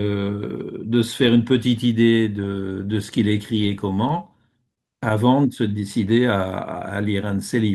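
Speech with repeated stalls (stutter) between 3.95 and 5.13 s: nine brief hitches, the longest about 28 ms, totalling roughly 105 ms. Late packets let the jitter buffer run dry, and the receiver stretched the last sound each time, so nothing is lost but the speech drags.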